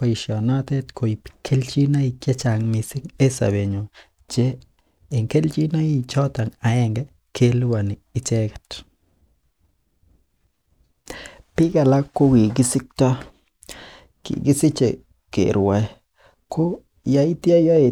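A short stretch of speech, and nothing technically wrong turns up in it anywhere, so there's no fault to point to here.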